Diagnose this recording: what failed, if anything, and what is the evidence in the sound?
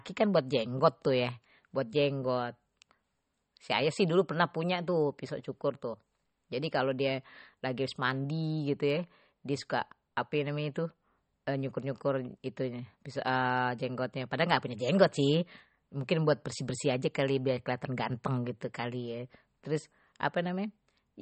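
Codec stage: likely MP3 compression starved of bits, fitting about 32 kbps. The speech stops dead at 8.4 kHz throughout and swirls watery.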